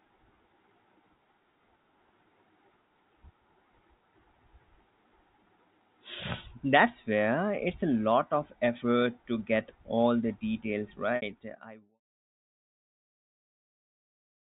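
Speech in G.711 telephone coding, fading out smoothly until about 12 s, has one packet loss with pitch repetition from 11.16 to 11.22 s, between "get all the details" and "I once saw". The receiver bridged the 60 ms gap by repeating the last pitch period, which sounds like a brief, slightly held buzzy tone. On the waveform it shows as identical cycles copied end to end, and on the spectrogram as flat, unchanging harmonic stripes.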